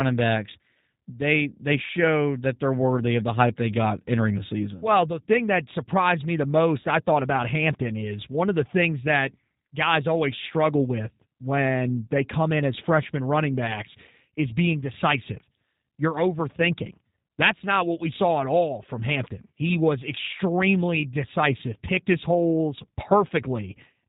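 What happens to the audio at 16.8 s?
G.729 codec coding is present at 16.8 s and throughout the clip. The speech is rebuilt from a vocal tract filter, a pitch predictor and sparse pulses, which fits an 8 kbit/s stream. Nothing above 4 kHz survives, and the speech sounds plainly rough and synthetic.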